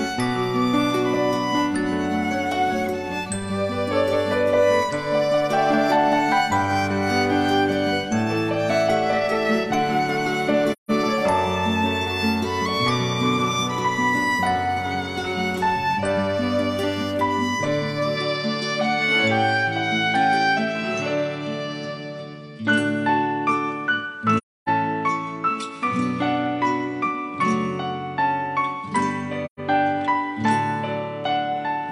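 At 10.72 s the audio drops into a soft-faded hole lasting about 0.17 s until 10.91 s, the mark of AAC frame loss with muting. The decoder zeroed the missing frames, and overlapping windows taper the edges, so a spectrogram shows a clean vertical blank column and the waveform pinches to silence.

From 18.17 s to the end, the sound turns duller with no gap or level jump, likely an input switched to a poorer device. The spectrogram loses everything above 10.5 kHz, and a faint new noise floor appears well below the signal.

The same muted-frame holes recur at 24.37–24.69 s (about 0.3 s) and 29.45–29.60 s (about 0.13 s).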